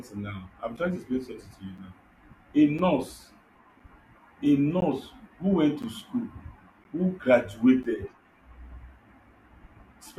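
Gaps between stream segments cut the speech at 0.77, 1.78, 2.79, 3.80, 4.80, 5.82, 6.84 and 7.83 s, the first right after "now i'm". Segment timing leaves silent holes of 6 to 17 ms each second.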